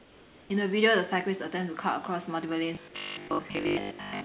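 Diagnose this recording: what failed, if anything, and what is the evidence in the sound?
Call processing, most likely discontinuous transmission at the sender: from 0.0 to 0.5 s the real room background is swapped for comfort noise. The background, about 26 dB below the loudest speech, turns steady and featureless, and drops by about 3 dB.

Buffer or jitter-buffer stage: from 2.75 s to the end, the playout likely ran short of fresh packets and kept repeating the last 20 ms block. That produces the robotic sound from repeated short buffers, a rigid metallic buzz at 50 Hz across about 70% of that stretch.

Sound dropped by the voice detector: inside that buzzing stretch, the sender's detector likely misjudged the speech as background twice. Brief gaps of comfort noise, 3.28 to 3.30 s and 3.48 to 3.50 s, replace the speech, losing 10 ms and 20 ms of it, within the narrowband 4 kHz call audio.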